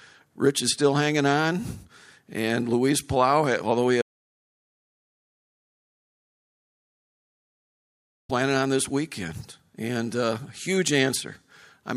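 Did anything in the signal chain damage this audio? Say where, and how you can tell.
Yes. There is an audio dropout to silence from 4.02 s to 8.29 s, about 4.27 seconds long. The speech stops mid-flow after "although he" and resumes on "on this weekend and". The gap is silent, with no room tone or noise floor. That points to the input path rather than the codec or playback. The likely cause is a lost input, such as a disconnected device, failed link or mute, while the recorder kept writing silence. The words from that stretch are gone.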